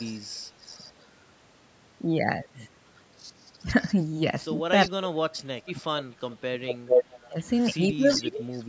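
From 0.0 to 1.06 s and 2.96 to 4.91 s there is echo leak: a faint delayed copy of the sound trails by about 0.4 s, likely because a far-end echo canceller let loudspeaker pickup through. Unlike reverb, it is a distinct repeat rather than a smooth tail.

From 4.88 to 6.72 s comes speech suppressed in double talk. The talker dips by up to about 30 dB, likely because the canceller mistook overlapping talk for echo.

From 5.77 to 7.43 s the echo returns at roughly 430 ms, here louder than the speech itself. Brief suppression follows at 7.27 to 7.36 s and 8.05 to 8.41 s, and a final echo runs from 8.09 to 8.63 s.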